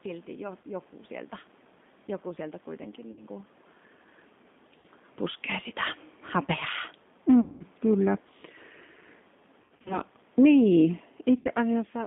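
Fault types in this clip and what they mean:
G.729 codec, throughout: the speech is carried by a low-rate codec, which fits G.729A at 8 kbit/s. It rebuilds each short frame from a vocal tract filter, pitch predictor and a few pulses, leaving audible roughness and a synthetic edge within a 200 Hz to 3.6 kHz band.
VoIP packet loss concealed by the speech codec, at 0.62, 3.1–3.24, 4.8–4.87, 7.41–7.63, 9.62–10.0 and 11.39–11.49 s: the decoder fills 20 to 200 ms gaps by extending its last pitch and filter with falling gain. This gives buzzy, fading stretches, scattered near 9.6 s, with weak recovery afterwards.
Automatic gain falling, from 10.25 to 12.02 s: the gain control judged the input too loud or its background noise too strong and lowered its gain gradually by about 4 dB. Speech and background sink together, unlike the talker's own movement around 11.5 s.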